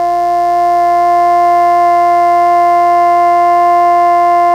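A mains buzz runs under the music from start to finish. Sharp switching spikes, twice per cycle of the 60 Hz supply, leak into the signal path. Their harmonics climb into the kilohertz range. It sounds like a steady, raspy buzz, roughly 30 dB below the music.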